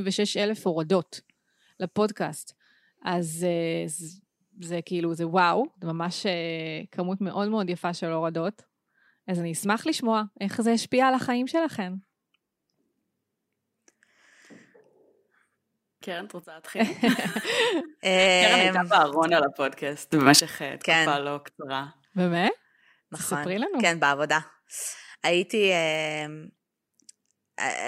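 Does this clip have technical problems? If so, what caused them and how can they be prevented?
Yes, there are two sudden gain jumps in this speech clip. At 16.44 to 16.64 s the level drops by about 15 dB, and at 20.12 to 20.40 s it jumps up by about 16 dB. The background noise moves right along with the voice, so this is likely a digital gain setting applied instantly, without a ramp. To prevent it, smooth every gain change over a few milliseconds instead of switching it from one sample to the next.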